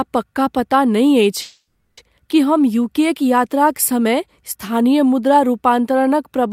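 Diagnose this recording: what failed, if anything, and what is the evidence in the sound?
Network fault: a call audio freeze after "पक्का पता नहि", 1.41 to 1.99 s. The last sound is held as a buzz or hiss, fades to silence, then resumes intact. Delayed packets likely emptied the jitter buffer.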